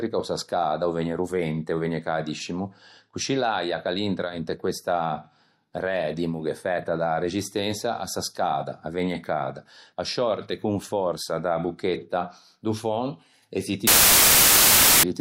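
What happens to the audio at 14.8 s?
At 14.8 s the speech is buried under samples built from the wrong bytes, a fault running from 13.87 s to 15.03 s. Each sample's bytes are assembled in the wrong order or alignment, so the rapidly changing low bits end up as the most significant part. The result is loud, harsh broadband noise. On a waveform the span becomes a dense, high-level block. A spectrogram shows broadband energy.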